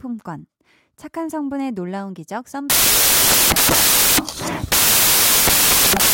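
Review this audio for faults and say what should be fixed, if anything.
From 2.70 s to the end of the clip, the speech turns into loud, harsh broadband noise from samples built from the wrong bytes. The reader is misaligned or has the byte order wrong, so each sample's rapidly changing low-order bits land in the high-order position and dominate the waveform. To prevent it, the decoder should take sample width, byte order and frame alignment from the stream header and check them, rather than assuming them.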